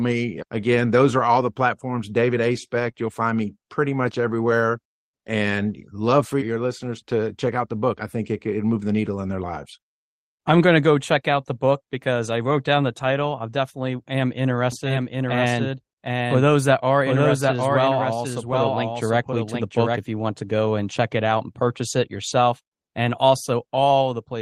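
At 2.79 to 2.89 s there is a lost packet rebuilt from error correction. About 60 ms of audio, which fits three 20 ms packets, was replaced by the decoder's low-bitrate backup copies. There is no gap or smeared fill, as there would be with plain concealment. The stretch simply turns briefly rougher and noisier.

From 14.72 to 19.98 s the speech has a doubled audio track. A second full-band copy sits roughly 0.7 s behind the original and about 5 dB quieter, likely from a slower second capture path. Unlike room echo or reverb, the copy has no decay tail or room colour, and it starts and stops abruptly.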